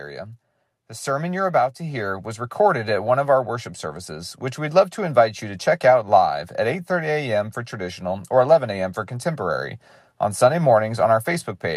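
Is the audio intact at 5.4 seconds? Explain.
No, 5.4 s falls inside an automatic gain rise from 0.87 to 5.7 s, where the AGC judged the input too quiet and gradually pushed the speech and background up about 8 dB together.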